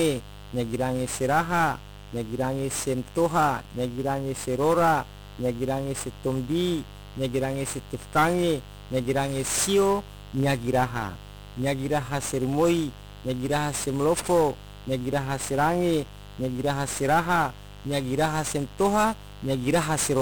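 Mains buzz runs through the whole speech clip: switching spikes from the 50 Hz supply leak in twice per cycle, adding a raspy buzz roughly 15 dB below the voice. 1-bit DFPWM compression is also present throughout. Each sample steers an adaptive level up or down, a heavy loss consistent with a 48 kbps stream, leaving the speech fuzzy and crackly, with treble drowned in hiss.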